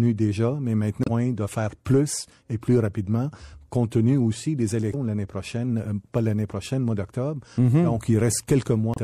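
A speech clip with plainly audible MP3 compression throughout. It sounds watery and swirly, with smeared attacks, likely from a rate near 64 kbps. Damaged data in a compressed stream causes brief glitches at 1.01 to 1.08 s, 4.93 to 4.95 s, and 8.92 to 8.98 s. At each one the decoder loses sync and searches for the next frame header.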